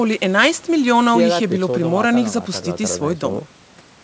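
No faults detected in this speech, which carries the expected wideband call character of G.722 telephone coding with nothing above 8 kHz.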